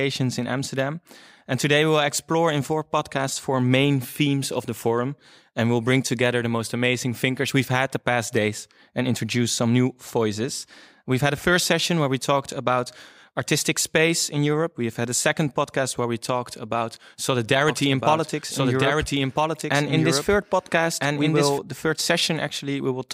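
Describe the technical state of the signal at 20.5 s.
A doubled audio track runs from 17.68 to 21.58 s, so at 20.5 s a second full-band copy of the speech plays underneath the original, trailing it by about one and a half seconds at roughly equal loudness. The copy is dry, with no decay or room colour, and it starts and stops abruptly, ending just before "the third". The likely cause is a slower second capture path or an edit holding two misaligned copies.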